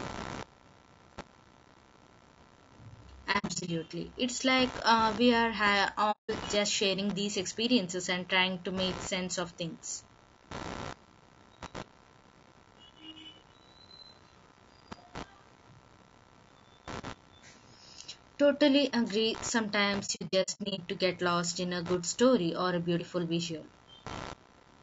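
Load changes in the computer are shifting the ground that the audio circuit shares, and this computer activity noise runs through the whole recording. It comes through as a buzzy, scratchy pulsing at roughly 70 Hz, sitting about 20 dB below the speech, and it rises and falls with the machine's activity rather than with the talking.

Throughout the clip the speech is also plainly damaged by coding. This is likely low-delay AAC compression (AAC-ELD), working at a rate that fits around 32 kbps. Its short frames cannot resolve the pitch harmonics cleanly at that rate, so the voice sounds rough and grainy, with noise filling the gaps between harmonics and a thin, synthetic-sounding top band.

Three stretches show AAC frame loss with muting. The decoder zeroed the lost frames, and the overlapping windows fade the sound out and back in, leaving soft-edged holes. From 3.32 to 3.70 s, 210 ms of audio is missing. 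The gaps are scattered over 360 ms, with the longest single run near 70 ms, so the speech flickers. From 6.11 to 6.30 s, a single 180 ms dropout opens. From 20.06 to 20.80 s, 360 ms is lost across 720 ms, again in short broken runs of up to about 70 ms, which chop the speech into fragments.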